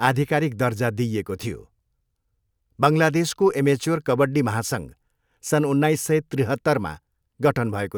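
Nothing in the speech recording points to a technical fault: the signal holds steady throughout, with no audible disruption, distortion or loss anywhere in it.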